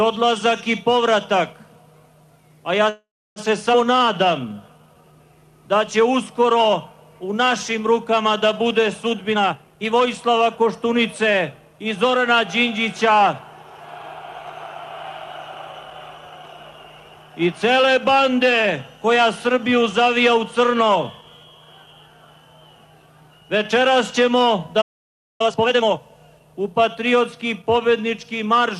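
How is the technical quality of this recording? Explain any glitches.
The recording has a cluster of network-timing faults in its first few seconds, a long accelerated stretch in the middle, and a stall near the end with an abrupt recovery.

At 2.89 to 3.39 s there is a call audio freeze. The sound does not simply stop. It is extended as a fading buzz or hiss that drops into roughly 300 ms of silence, and the whole hold lasts about 466 ms. When the audio resumes, it picks up exactly where it left off, with nothing lost. The likely cause is packets held up in transit while the jitter buffer ran dry, so the receiver padded the gap by continuing the last sound. A playback stall differs in one clear way: a stall goes straight to silence, with no decaying continuation first.

At 3.72 to 3.76 s comes a skip ahead. Playback jumps forward with almost no gap, only about 8 ms of fill. Roughly a tenth of a second of audio is gone, and the two sides are butted together, so the sound lurches. 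This happens when a stretch is discarded, here shedding about 100 ms of the delay the freeze had just built up, while later audio is already queued. It is the opposite of the freeze: time is removed rather than inserted.

From 3.92 to 5.13 s there is a jitter buffer slow-down. The audio runs at about 90% speed with its pitch unchanged, so sounds are drawn out. This is repeated pitch periods adding about 128 ms, done to rebuild the receiver's reserve. The change is spread smoothly over more than a second. That sets it apart from the freeze, which inserts one block of filler.

From 9.32 to 12.16 s there is a jitter buffer speed-up. The audio runs at about 116% of normal speed at the same pitch and sounds hurried for nearly three seconds. Short pitch-period pieces are being trimmed over and over, about half a second in total, to pull down an oversized buffer delay. Unlike the skip ahead, nothing is removed in one chunk. 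The loss is spread thinly, so there is no audible jump.

At 24.81 to 25.41 s there is a playback stall. The output cuts to dead silence mid-flow for about 583 ms, with no tail or filler, and then restarts. The likely cause is the player running out of data or its thread being blocked. The clean, hard cut is what separates it from the call audio freeze, which fades out its last sound first.

From 25.41 to 25.99 s there is a time-compressed catch-up. Right after the stall, the audio plays at double speed at normal pitch, hurried, as the player cuts out and cross-fades small pieces to clear its backlog. It is much faster and briefer than the mid-clip speed-up, and it is tied directly to the stall that precedes it.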